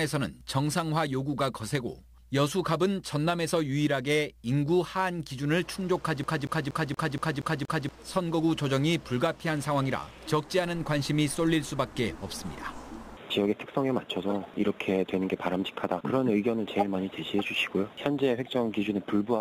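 From 6.24 s to 7.89 s the audio sticks like a CD stuck on one turn. A single 236 ms fragment repeats seven times, each pass cut by a brief mute as the pickup jumps back one track. The result is a rapid, evenly spaced stutter.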